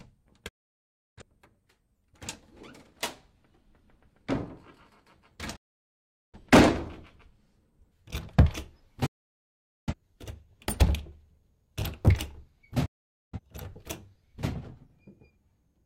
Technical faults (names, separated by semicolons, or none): digital broadcast dropout